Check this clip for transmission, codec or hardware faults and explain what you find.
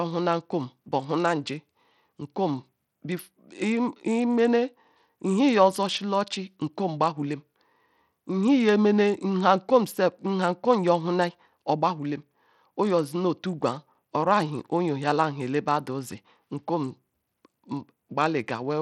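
Codec damage runs through the whole recording. Bluetooth SBC compression, from start to finish, is the likely cause. With too few bits, SBC starves its upper sub-bands and coarsely quantises the rest. Here the speech's treble thins and flickers, with gritty noise and aliasing riding on it, plainly audible and consistent with a low bitrate around 80 kbps.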